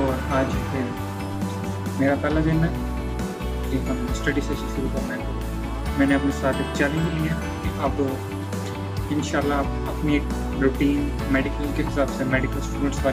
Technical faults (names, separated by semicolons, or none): none